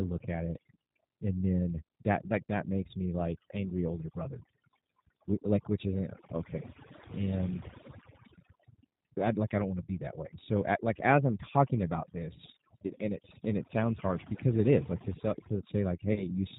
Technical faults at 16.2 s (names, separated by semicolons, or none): overdone noise removal; G.729 codec; VoIP packet loss concealed by the speech codec